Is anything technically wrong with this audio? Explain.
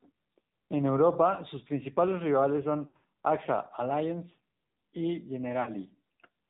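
Yes. Two faults are audible.

Throughout the clip, the speech carries AMR narrowband mobile codec damage, and it is plainly audible. The codec samples at 8 kHz, so nothing above 4 kHz survives and the voice sounds boxed-in and dull. It rebuilds speech from a vocal tract model driven by a few pulses per short subframe. At this bit starvation, the voice turns buzzy and synthetic, which points to a low mode around 7.4 kbps.

There are lost AMR speech frames at two points. The first comes just after "sus principales rivales son", from 2.88 to 3.04 s. Dropouts scattered over about 160 ms total about 120 ms, and the longest run is about 60 ms. The second runs from 5.62 to 5.70 s and lasts about 40 ms. In each gap, the decoder repeats the last good pitch and vocal tract settings at falling gain. The sound smears and warbles, dips, then returns briefly rough.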